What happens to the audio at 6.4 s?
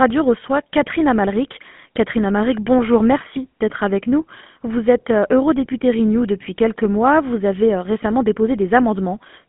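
At 6.4 s you're hearing the same GSM full-rate codec coloration that runs through the whole clip. The vocal tract gets modelled and driven by a sparse pulse train, so speech turns buzzy and gravelly, squeezed into a roughly 150 Hz to 3.5 kHz phone band with nothing above 3.8 kHz, which fits a 13 kbps GSM link.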